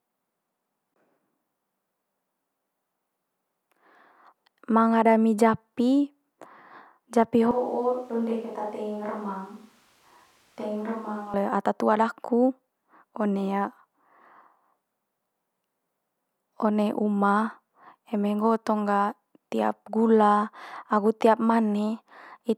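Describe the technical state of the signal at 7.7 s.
The close microphone has likely dropped out, leaving a distant microphone from 7.51 to 11.34 s, so the speech turns suddenly roomy, hollow and thin, roughly 10 dB quieter, with more audible background noise.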